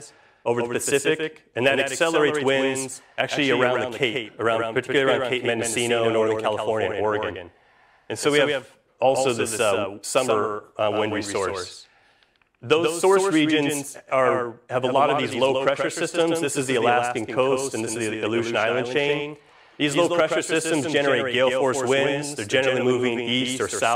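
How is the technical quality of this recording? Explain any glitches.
The recording has one persistent fault.

Doubled audio track, throughout: a second full-band copy trails the original by roughly 150 ms, at about 5 dB quieter. It was likely captured a second time through a slower path, so every sound is shadowed by a dry, slapback-style repeat with no decay or room colour.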